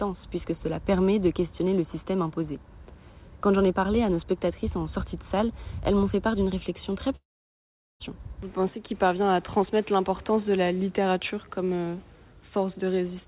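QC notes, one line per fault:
7.16 to 8.03 s, long network dropout: the sound breaks into a short buzzy continuation of the last moment that fades away, leaving near silence for about 0.78 s before the audio resumes with roughly 0.84 s of material gone. The likely cause is an interruption in arriving packets, with the receiver briefly concealing the gap by extending the previous sound, then giving up. The narrowband call path, with nothing above 4 kHz, fits G.711 mu-law.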